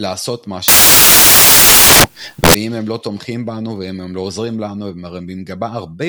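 Samples built from the wrong bytes, from 0.68 to 2.54 s: the bytes of each sample are assembled in the wrong order or offset, so the rapidly changing low bits land in the high part of every value. The speech turns into loud, harsh broadband noise for that stretch.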